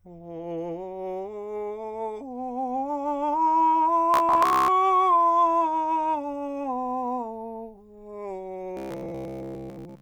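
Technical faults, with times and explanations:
4.14–4.68 s and 8.77–10.02 s, robotic sound from repeated short buffers: new audio likely stopped arriving on time, so playback filled the gaps by looping the last roughly 15 ms fragment while most of the real music was skipped. Each loop repeats at a fixed rate, laying a steady 66.8 Hz buzz over the music, which turns rigid and metallic while still loosely tracking its shape. The second stretch lasts to the end of the clip.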